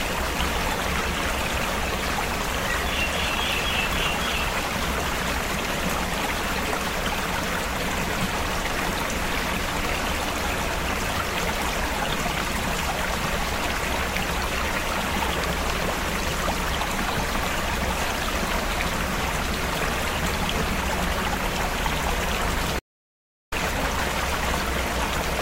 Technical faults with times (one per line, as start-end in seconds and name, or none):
22.79-23.52 audio dropout to silence